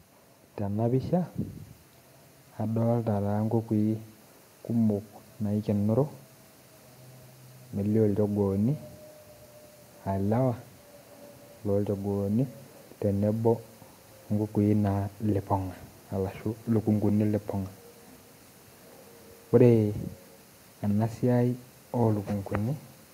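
From 0.6 s to about 5.8 s, automatic gain rising: the gain control judged the incoming level too low and kept raising its gain, by about 4 dB over those five seconds. The speech swells slowly. What separates this from a speaker simply talking louder is that the background noise floor climbs in step with the voice, so the whole signal lifts together rather than the voice alone growing.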